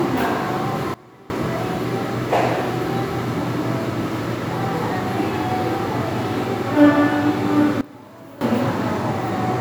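A sudden gain jump at 0.94 s drops the level by about 21 dB until 1.3 s, and another from 7.81 to 8.41 s cuts about 18 dB. Sound and background noise fall and return together in one step, likely from digital gain changed without a ramp.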